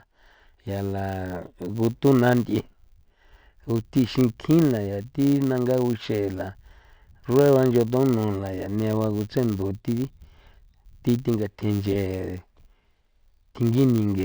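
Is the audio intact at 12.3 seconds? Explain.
No. At 12.3 seconds, as across the whole speech clip, the filter is restarted on every block, dropping its stored state so each block starts from silence. Each restart leaves a small transient, heard as a 100 Hz buzz that rises and falls with the speech level, which points to 10 ms blocks.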